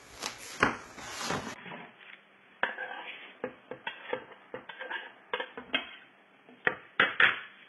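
From the start, the everyday sounds carry a faint hiss and roughness that swells on loud, bright moments and disappears in pauses. That is sample clock jitter: timing wobble of around a microsecond, leaving error roughly 40 dB under the signal, visible as a noise haze tracking transients on a spectrogram.

Throughout, the spectrum stops dead at 11.8 kHz, and the treble below it sounds gritty and metallic rather than natural. This is likely HE-AAC compression, heavily damaged, pointing to a very low bitrate near 16 kbps. A spectrogram shows copied, blocky high bands with misaligned harmonics.

At 1.54 s, a 20 ms gap of silence appears in the waveform. After it, the sound turns dull and boxy, roughly 10 dB quieter, with nothing above 3.4 kHz and a new noise floor about 30 dB down. This fits an input switched to a poorer device, seen as a hard spectral ceiling until the end.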